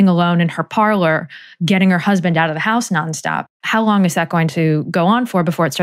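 No technical faults are audible anywhere in this speech recording.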